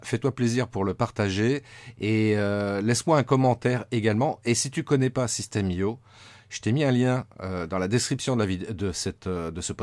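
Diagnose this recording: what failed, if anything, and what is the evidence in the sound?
Nothing in the recording points to a failure at any stage between capture and playback. No event in the speech calls for a diagnosis.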